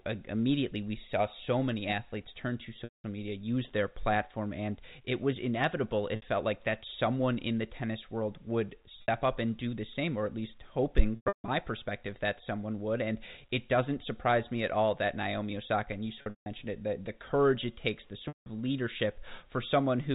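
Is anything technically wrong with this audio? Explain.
Yes. The speech has packet loss with pitch repetition at 2.84–3.04 s, 6.16 s and 9.02 s (60 ms each), 11.16–11.48 s, 16.22–16.46 s and 18.28–18.46 s. Missing packets were bridged by looping the last pitch period. The 60 ms gaps sound like a brief buzzy hold. The longer gaps, including broken runs at 11.16 and 16.22 s with the longest stretch lasting 160 ms, fade toward silence before the speech cross-fades back. This differs from plain dropouts because a tonal hold, not an abrupt hole, fills the gap. The G.711 telephone band carries the speech throughout.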